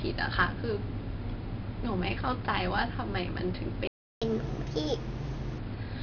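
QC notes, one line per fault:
Throughout: 4-bit ADPCM compression, heavy. Each sample is coded as a coarse 4-bit step from a prediction, so a gritty hiss rides on every loud syllable and sharp onsets distort where the step size lags. The rate fits roughly 44 kbps.
3.87–4.22 s: playback stall. The speech cuts off mid-flow and the output goes silent for 0.34 s before resuming. The likely cause is the player running out of buffered data or its audio thread being blocked, leaving nothing to output until it recovered.
4.22–5.58 s: catch-up at higher speed. Straight after the stall the backlog is played at 1.25× by resampling, so the speech runs faster and pitch rises by about four semitones. At 5.58 s both drop back to normal once the lost time is made up.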